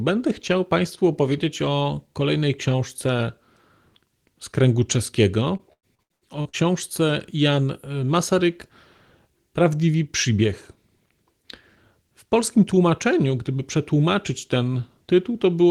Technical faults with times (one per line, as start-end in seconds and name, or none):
5.57-6.55 repeated packet loss (robotic sound)